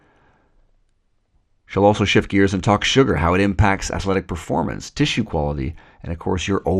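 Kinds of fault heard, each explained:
MP2 compression: The sound is dull and gurgly throughout, with plainly audible granular distortion. Likely cause: MPEG Layer II at a low rate, around 80 kbps.
DAB burbling: From 5.81 to 5.90 s, short blips of noise appear. Bit errors slipped past error correction, putting wrong samples into single sub-bands.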